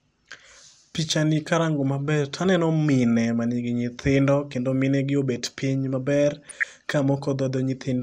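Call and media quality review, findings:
Dull, gurgling, granular speech throughout, upper bands flickering out. Likely MP2 compression, starved sub-bands coarsely quantised or dropped; fits roughly 80 kbps.

Burbling noise blips 6.32–6.64 s, just after "gi obed piny maber". DAB burbling: residual bit errors corrupt MP2 scale factors, single sub-bands jump in level for up to a frame.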